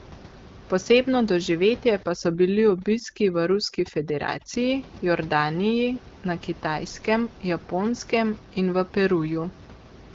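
A speech recording in which overdone noise removal takes hold from 2.03 to 4.54 s. Over that stretch the room noise, sitting about 22 dB below the speech, is pushed down and broken up, leaving twinkling specks where individual frequency bands flicker on and off. Quieter parts of the voice are caught by the same over-aggressive suppression. The band stops at about 7.4 kHz, which fits an AMR wideband (HD Voice) codec at around 12.65 kbit/s.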